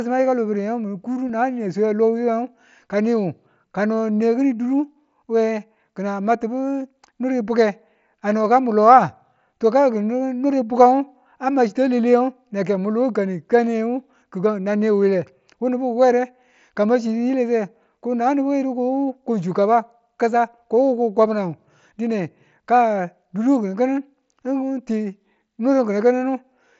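At 1.28 s, concealed Bluetooth headset packet loss: a 15 ms gap, consistent with two lost frames, was filled by repeating recent waveform.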